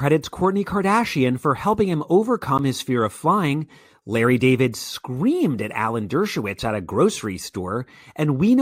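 At 2.58 s there is a block of digital silence about 12 ms long. The speech drops out and returns with no fade. That length fits a 512-sample buffer left unfilled in time. It sounds like a brief click or tick.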